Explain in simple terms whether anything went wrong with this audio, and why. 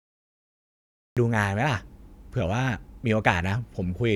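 Yes. This is a cut-off start: the first 1.17 seconds are dead digital silence, then the speech jumps in at 1.17 s already mid-sound, with no natural rise. Unlike a quiet pause before talking, the recording simply began too late and missed the beginning.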